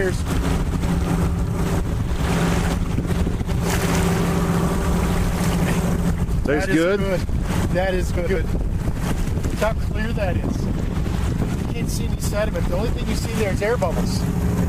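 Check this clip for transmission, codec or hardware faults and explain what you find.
One fault type appears twice. Frames out of order at 4.74–4.94 s and 8.16–8.36 s: two adjacent blocks of about 93 ms swapped, giving a garbled flutter.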